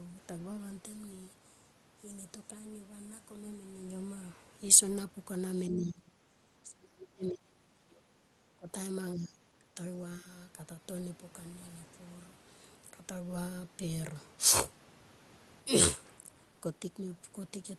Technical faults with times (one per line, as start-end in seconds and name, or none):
5.69-8.68 speech suppressed in double talk
9.14-9.77 speech suppressed in double talk
10.20-10.26 speech suppressed in double talk